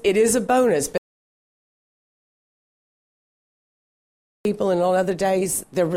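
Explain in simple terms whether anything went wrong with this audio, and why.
The sound cuts out at 0.98 s into dead silence until 4.45 s, an audio dropout to silence, most likely from the input disconnecting or muting.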